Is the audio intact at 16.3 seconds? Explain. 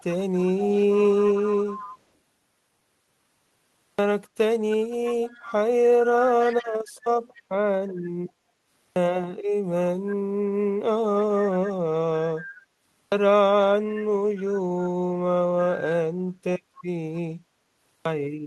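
Yes, the audio is intact at 16.3 seconds, with no fault there.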